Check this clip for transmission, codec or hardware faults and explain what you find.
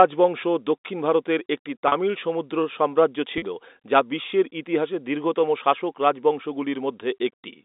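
Two short packet losses with pitch repetition are audible in the speech, heard over the G.711 telephone band of roughly 250 Hz to 3.7 kHz.

At 1.88 to 1.92 s, between "দক্ষিণ ভারতের একটি" and "সমুদ্র সাম্রাজ্য", and at 3.38 to 3.42 s, between "সমুদ্র সাম্রাজ্য" and "যা বিশ্বের ইতিহাসে দীর্ঘতম", about 40 ms goes missing, which fits two lost 20 ms packets. The receiver replays the last pitch period to fill the gap, so each event sounds like a brief, slightly buzzy held tone.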